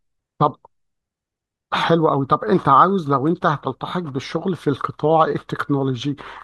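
No audible faults anywhere in the speech; nothing to flag.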